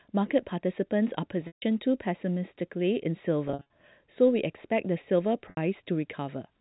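Packet loss with pitch repetition at 1.47 s, 3.48 s and 5.5 s: the receiver repeated the last pitch period to fill the gaps, about 150 ms, 160 ms and 70 ms of missing audio, so the sound briefly buzzes and holds before fading. The second event is scattered over 220 ms in runs of up to 50 ms, consistent with 10 ms packets.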